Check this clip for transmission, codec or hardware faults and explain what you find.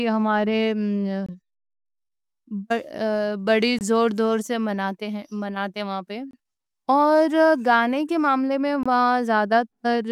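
One fault is present: a gap between chunks, repeated four times. Silent holes of about 23 ms occur at 1.26–1.29, 3.79–3.81, 6.31–6.33 and 8.83–8.86 s. The speech arrives in 2.5-second chunks, and a short stretch of silence sits at each join. Nothing is lost, but each join is heard as a brief dropout at a steady rhythm.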